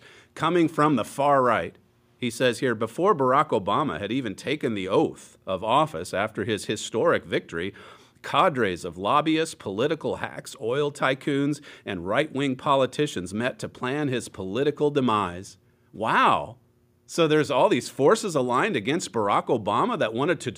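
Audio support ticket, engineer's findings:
No faults found in the speech recording. Nothing heard points to a failing component anywhere in the chain.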